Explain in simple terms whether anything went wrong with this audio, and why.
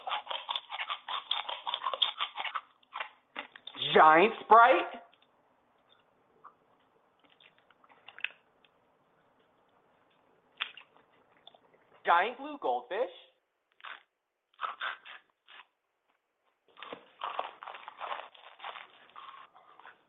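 Nothing went wrong with this audio, because no fault can be heard anywhere in it.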